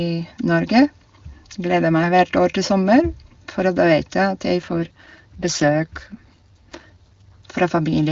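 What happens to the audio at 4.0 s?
Nothing goes wrong at 4.0 s: the speech passes intact through the AMR wideband (HD Voice) codec, which at its top rate leaves little or no audible damage.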